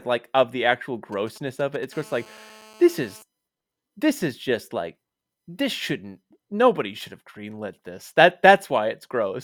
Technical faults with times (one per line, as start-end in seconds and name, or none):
1.12-1.85 GSM signalling bursts
1.93-3.22 GSM phone buzz